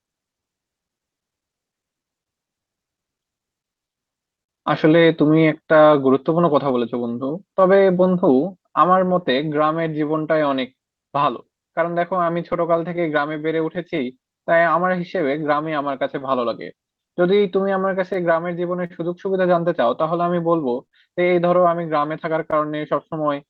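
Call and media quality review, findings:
Clock drift between sender and receiver, entire clip: sender clock around 4% slow relative to receiver. Jitter buffer keeps draining, so the receiver has to stretch the audio. Result: speech pacing subtly dragged, with small recurring timing hiccups at irregular intervals.

Repeated timing corrections, 0.21 to 23.47 s: receiver inserts repeated short pieces to keep pace with the slow sender, playback running at about 97% speed. Edits all lengthen, unevenly spaced, adding roughly 0.7 s in total. Heard as slight stutters and an unsteady, slightly slowed tempo.

Scattered short gaps, three stretches: late or lost packets concealed by extending the preceding sound. 0.01 to 4.51 s: about seven, longest around 50 ms. 6.69 to 9.34 s: three very brief ones, around 10 ms. 11.80 to 22.79 s: about twenty, longest around 50 ms. Brief ticks and smears in otherwise clear speech. 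The Opus call path's band limit, consistent with content up to about 12 kHz, applies throughout.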